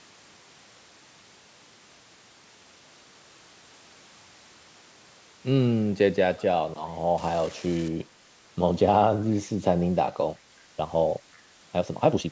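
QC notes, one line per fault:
7.18–7.88 s, unreliable data bit: for about 0.7 s a steady crackling fizz sits over the speech and carries on through the gaps. One bit of the sample word is flipping at random, so each bad sample jumps by the same fixed amount no matter how loud the signal is. That makes an even, signal-independent crackle. The normal microphone processing leaves the speech with nothing above 8 kHz.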